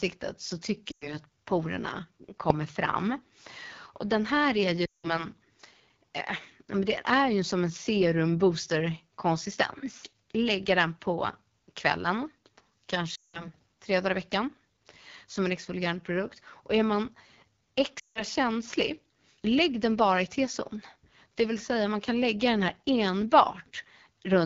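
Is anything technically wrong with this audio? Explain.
Yes, there are two problems. The whole clip goes through the AMR wideband (HD Voice) codec at 8.85 kbit/s, one of its lowest rates. The codec models speech below 6.4 kHz and fills the top band with shaped noise, and at this rate the damage is plainly audible: the speech sounds rough and raspy.

There are also lost AMR speech frames at 0.91–1.17 s, 4.85–5.26 s, 13.15–13.49 s and 17.99–18.24 s, with gaps of 100, 180, 180 and 160 ms. That fits runs of roughly five to nine frames failing their checksum. The decoder reuses the last good settings with falling gain, so the sound drops to near silence and then comes back weak or rough.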